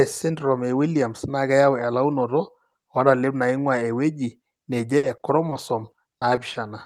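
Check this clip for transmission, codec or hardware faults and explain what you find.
There is one transmission fault: repeated packet loss (robotic sound) from 4.97 to 6.57 s. Ten short holes, the longest 60 ms and 240 ms in all, are each patched by stretching the preceding sound, so about 15% of that stretch is concealment. The speech turns choppy. A single dropout would leave one clean gap; here the gaps recur in quick succession, giving the stuttering, synthetic texture.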